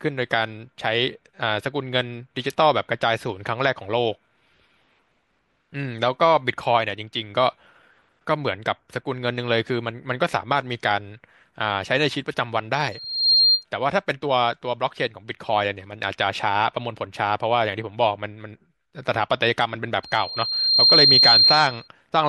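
Loudspeaker feedback squeal hits at 12.91–13.65 s and again, louder and slower to build, at 20.03–21.88 s: a 4.2 kHz loop tone swelling over speech.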